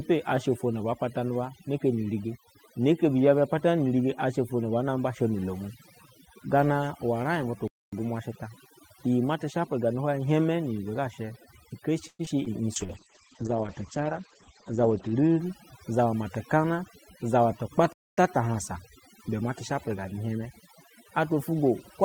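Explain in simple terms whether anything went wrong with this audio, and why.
Several things went wrong. Throughout the clip, overdone noise removal is at work: a cleanup tool set far too strong switched off parts of the sound it mistook for background noise. The pauses fall to near silence with twinkling specks.

At 7.68 s and again at 17.93 s there is a gap between chunks. The audio was handled in pieces about ten seconds long, and silence was left at each join. Nothing is lost, but each time a quarter-second hole cuts in.

From 12.07 to 12.21 s there is a call audio freeze. Delivery of the sound was likely held up, so the receiver stretched out the last sound for about a tenth of a second, with a brief silent stretch, before the speech carried on from where it stopped.

Right after that, at 12.25 s and 12.44 s, comes short concealed packet loss. Tiny slivers of the call, each about two hundredths of a second, never arrived. 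The receiver patched over them, leaving small smears or wobbles.

From 12.78 to 15.45 s there is a call bitrate drop. The connection seemed to weaken, so the sound was sent in much less detail. It turns rough and muffled, with everything above about 8 kHz cut off, until quality returns.

From 14.83 to 16.23 s there is a jitter buffer speed-up. The receiver had built up too much waiting audio and trimmed tiny slices to catch up, about a seventh of a second in total. The speech runs about 9% faster at the same pitch and sounds hurried.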